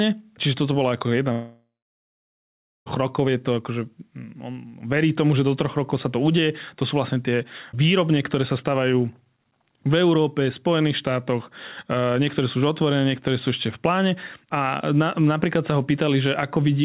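At 1.32 s the sound cuts out for about 1.5 seconds, returning at 2.88 s just before "rokov je". It's likely a long network dropout: the receiver smears the last bit of sound into a fading buzz, then holds about 1.2 s of near-silence before the stream picks up again further on, so that stretch is simply gone. Throughout, nothing above 4 kHz comes through, which fits a narrowband call codec like G.711 mu-law.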